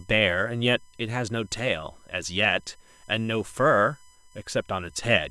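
Throughout the speech runs a USB whine, a steady 1 kHz tone well below the voice, from bus-frame current leaking into the audio; unlike mains hum, its pitch sits far above 50 or 60 Hz.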